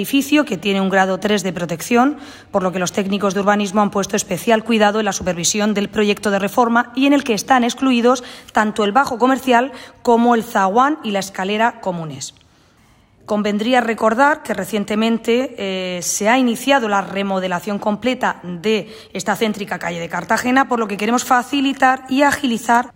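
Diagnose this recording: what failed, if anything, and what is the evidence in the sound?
Listening through the recording, nothing stood out that would point to a failure at any stage of the chain.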